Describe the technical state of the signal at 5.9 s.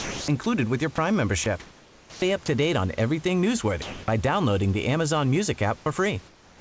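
Comfort noise in place of the background runs from 5.78 to 5.86 s. The room background turns into steady, featureless hiss about 3 dB quieter, likely discontinuous-transmission fill.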